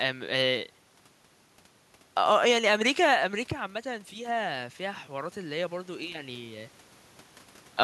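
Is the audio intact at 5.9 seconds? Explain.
No. At 5.9 seconds the voice and the room noise behind it are swelling together, slowly and steadily, as the automatic gain rising fault runs from 3.82 to 6.75 seconds. The input had dropped by about 9 dB when the talker moved back around 3 seconds, so the automatic gain control judged the signal too quiet and raised its gain by about 6 dB over nearly three seconds, lifting the background along with the voice.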